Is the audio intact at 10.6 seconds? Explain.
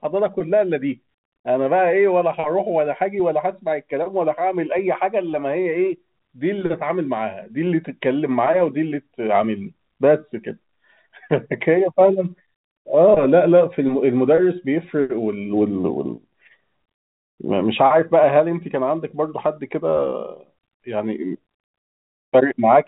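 Yes, the audio at 10.6 seconds is intact, with the speech coming through cleanly within the narrow telephone band of G.711 coding, which passes nothing above about 3.9 kHz.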